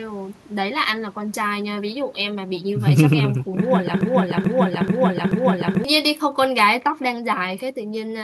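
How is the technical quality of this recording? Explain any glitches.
The recording has two distinct glitches, both after the four-second mark.

From 4.01 to 5.84 s there is a broken-record loop. The player, encoder or stream likely stalled and kept resending the last fragment it held in memory. A piece of about 0.43 s plays four times back to back, identical each time, which gives a mechanical stutter. The audio that belonged in that span never arrives and is simply lost.

From 6.15 to 6.80 s there are CD scratch ticks. A blemish on the disc wiped out more data than the error correction could rebuild, once per revolution, so the player had to interpolate or mute the damaged samples. It comes through as four regularly spaced ticks of uneven strength, each lasting only a few milliseconds, over roughly two-thirds of a second.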